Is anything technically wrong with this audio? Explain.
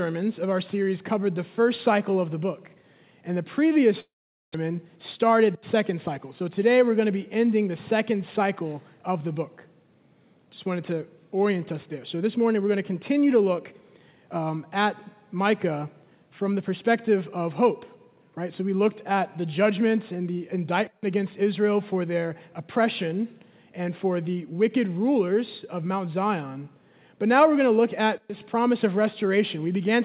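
Yes, there are two problems close together early on, heard through a phone-style G.711 mu-law path with nothing above 4 kHz.

From 4.0 to 4.56 s there's a long network dropout: the sound smears into a fading buzz, then goes quiet, and when it returns roughly 400 ms of material is simply gone. That's likely packets not arriving, with the receiver improvising a tail before giving up.

Right after, from 4.64 to 6.19 s, comes a jitter buffer speed-up. The backlog of around 150 ms gets trimmed by snipping tiny pitch-period slices, so the audio plays about 108% fast at unchanged pitch and feels briefly rushed.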